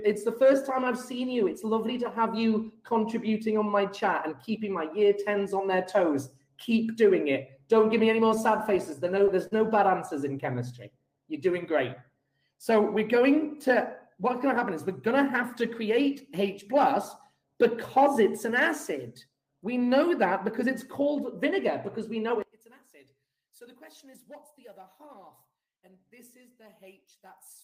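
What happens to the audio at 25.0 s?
At 25.0 s you're in the middle of a stretch from 22.42 s to the end at 27.64 s where the sound collapses, dropping by about 26 dB and going faint. The likely culprit is one channel inverted: with one side's polarity flipped, everything shared between left and right cancels when summed to mono. The centred material all but vanishes, leaving only a faint residue of whatever differs between the channels.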